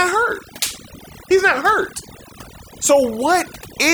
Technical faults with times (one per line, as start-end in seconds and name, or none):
0.00-3.94 overdone noise removal